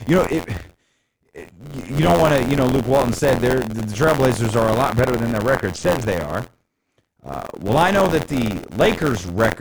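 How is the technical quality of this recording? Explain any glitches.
The recording has two clear problems: a continuous mechanical buzz running through the whole speech clip, and a stretch of dull, gritty audio near the middle.

Buffer tearing is present from start to finish. The software filling the playback ring buffer and the hardware reading it have drifted out of step, so they cross inside each period. About a tenth of every buffer replays audio from roughly 50 ms earlier, with a hard splice at each edge. This produces a robotic rattle at 86.1 Hz, which fits a 512-sample buffer. The rattle follows the speech and stops in the pauses. A waveform would show discontinuities repeating every 11.6 ms. A spectrogram would show vertical lines at that spacing and a comb of 86 Hz harmonics across the voiced sections.

A Bluetooth SBC bit pool drop runs from 4.89 s to 6.06 s, beginning after "are a" and ending just before "they are". 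Link congestion forced the sender to cut the SBC bit pool. The sound points to a fall from around 28 to about 6, roughly 60 kbps. Starved of bits, the upper sub-bands lose almost everything, and the remaining bands are coarsely quantised. The treble turns muffled and a grainy noise rides on the speech. On a spectrogram the energy above a few kHz is abruptly cut off, with blocky, speckled texture below.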